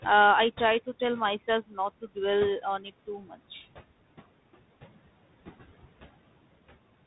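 Speech recorded over a call, with room noise sitting about 20 dB below the voice, shows noise suppressor artifacts throughout. The suppressor pulls that background down by about 17 dB, so the noise dips in the gaps and returns under the voice. Tandem speech coding also runs the full length. Nothing comes through above 3.9 kHz, and the added roughness and noise fit two G.726 passes at 32 kbit/s with a G.711 A-law link in between, each coder re-encoding the previous one's errors. Speech cut by the noise suppressor occurs three times. Right after "I try to tell", at 1.62–1.78 s, about a tenth of a second is lowered by up to about 17 dB. The second cut, at 2.62–2.91 s, removes around 150 ms by up to about 10 dB. The third, at 3.07–3.4 s, affects roughly 300 ms by up to about 15 dB. In each case the suppressor mistakes quiet speech energy for noise, so those sounds come out swallowed or faint.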